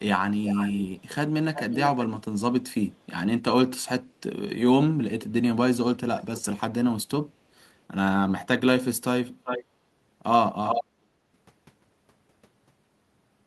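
Speech with echo leak: a delayed copy of the talker returns at 0.44–1.08 s, 1.54–1.88 s and 3.01–3.05 s, trailing by 355 ms, then at 9.44–9.64 s and 10.64–10.84 s, trailing by 394 ms. The early scraps sit well below the speech, the one at 3.0 s barely audible. The last two are nearly as loud as the original. The likely cause is a far-end loudspeaker whose echo canceller let part of its microphone pickup back into the call.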